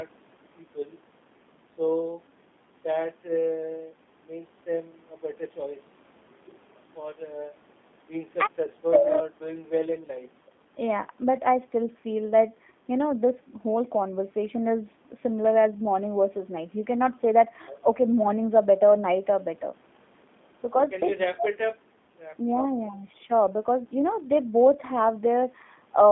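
G.729 codec damage runs from start to end of this speech clip. The voice is coded not as a waveform but as a short-term vocal tract filter, a pitch predictor and a sparse set of pulses per frame, which fits G.729A at 8 kbit/s. That rebuild leaves a plainly audible rough, slightly synthetic texture, and the band is confined to about 200 Hz to 3.6 kHz, so the sound is thin and muffled, like a phone line.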